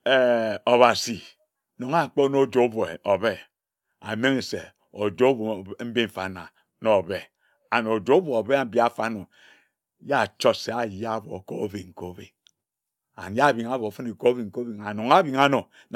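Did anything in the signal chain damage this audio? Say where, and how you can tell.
No, nothing in this speech recording stood out as damage from any stage of the signal chain on listening.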